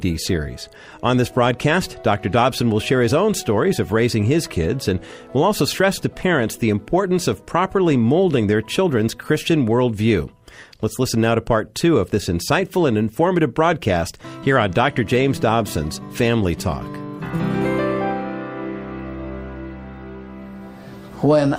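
No faults can be heard anywhere in the recording.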